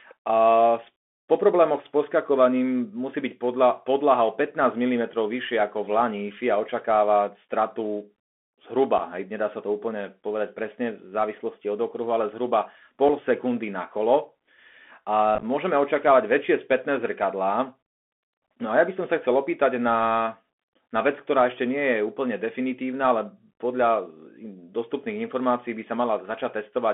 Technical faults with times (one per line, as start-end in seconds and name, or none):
0.00-26.94 Bluetooth CVSD headset codec
8.98-9.00 unconcealed Bluetooth headset packet loss
13.09 unconcealed Bluetooth headset packet loss
15.35-15.44 unconcealed Bluetooth headset packet loss